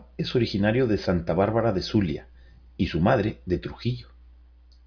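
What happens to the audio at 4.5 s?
At 4.5 s the speech carries on intact, with no dropout, click, distortion or other fault.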